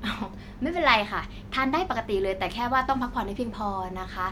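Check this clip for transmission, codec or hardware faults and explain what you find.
Listening through the recording, nothing stood out as a problem in how it was carried or captured.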